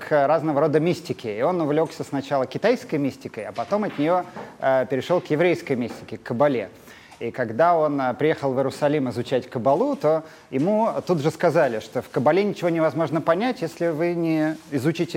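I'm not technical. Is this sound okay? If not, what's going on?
Yes, nothing wrong can be heard here.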